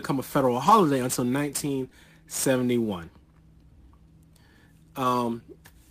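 Sample clock jitter runs through the whole speech clip. The converter's clock wanders by around ten microseconds, so steep parts of the waveform are sampled at the wrong moment. That produces a roughness roughly 20 dB below the speech. It swells on loud, bright syllables and disappears in pauses, unlike steady background hiss.

From 0.65 to 0.71 s, just after "a federal", comes a lost packet rebuilt from error correction. About 40 ms, which fits two packets, was replaced by the low-bitrate backup copy carried in the following packet, so there is no gap, only a briefly grainier stretch.

At 1.89 to 1.93 s, short concealed packet loss appears. About 20 ms never arrived, and the decoder extrapolated the preceding sound before crossfading back. The result is a small smear or wobble rather than a coarse but intact patch, and a quick sound can be swallowed.

At 5.03 s, a second lost packet rebuilt from error correction occurs. 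This time it is a single roughly 20 ms frame, heard as a momentary dip in clarity with the underlying sound still present.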